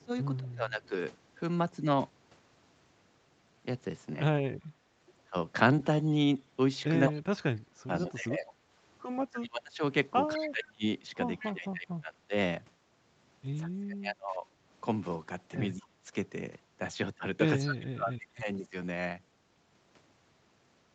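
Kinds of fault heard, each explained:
Speech suppressed in double talk: When both sides spoke at once, the echo canceller likely could not tell the near talker from loudspeaker echo, so it turned everything down together. The speech dips sharply, by up to about 35 dB, thinning or breaking into pieces at 0.0–0.94 s, through much of 7.08–12.34 s, and again at 13.65–14.45, 15.75–16.11 and 17.59–18.74 s. In total this adds up to several seconds of muffled or missing sound.
Echo leak: At a loudspeaker end, the echo canceller likely left part of what its microphone picked up, and that remainder was sent back into the call. A delayed copy of the speech follows 208 ms behind the original. It is a faint scrap at 6.07–6.11 s, then longer stretches at 7.19–8.52 s and 10.44–11.47 s. In the last of these it grows to only about 15 dB below the speech.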